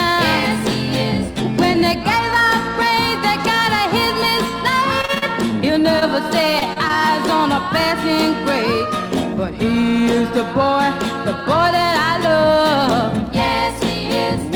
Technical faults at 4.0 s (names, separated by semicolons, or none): none